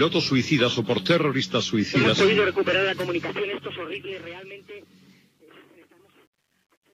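Truncation distortion on a fade runs from 2.78 s to the end at 6.93 s, where the audio fades out from roughly 3 s. The fade's gain stage appears to keep too few bits and adds no dither, which fits about a 10-bit path. As the level drops toward the smallest step, the waveform collapses into coarse square steps, so from 4.41 s to 6.94 s the tail turns gritty.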